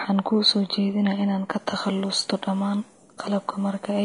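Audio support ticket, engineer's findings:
Speech throughout: hissy, grainy treble, roughened voicing, softened consonant attacks; band-limited, nothing above 10.6 kHz. Likely Vorbis compression at low quality, consistent with roughly 35 kbps. Coarse residue quantisation turns upper-band detail into equal-energy noise above the floor; cut-off lowered to save bits. Damage plainly audible.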